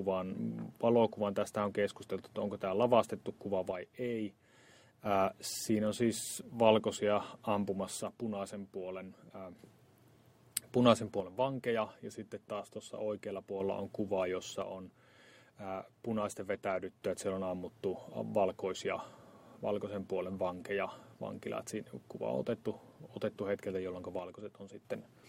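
The sound falls abruptly by about 6 dB five times: 3.71 to 5.06 s, 8.03 to 9.59 s, 11.20 to 13.60 s, 14.62 to 17.02 s, and 24.19 to 24.85 s. Each dip likely comes from one channel dropping out before the stereo pair is summed to mono.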